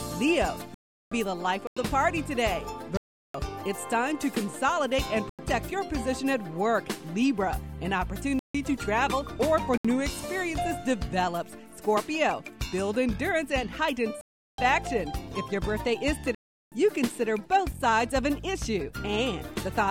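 The program likely failed to fill its output buffer in time, leaving blocks of digital silence at 0.74–1.12, 1.67–1.77, 2.97–3.34, 5.29–5.39, 8.39–8.55, 9.77–9.85, 14.21–14.58 and 16.35–16.72 s. The longest gaps last about 0.37 s, which fits 16384-sample blocks. Each hole opens and closes without a fade, so the sound cuts out and back abruptly.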